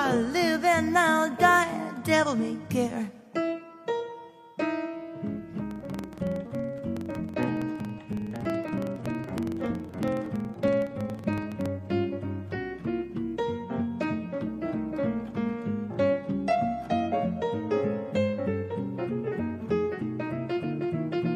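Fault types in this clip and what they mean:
Filter restarted on every block: from about 5.71 s to 11.75 s there's a rough buzz at around 21.5 Hz that rises and falls with the level of the audio. Some filter in the chain is dropping its memory at each block boundary and starting cold, so every block opens with a small transient. At that repeat rate the ticks fuse into a low buzz, which fits a 2048-sample block size.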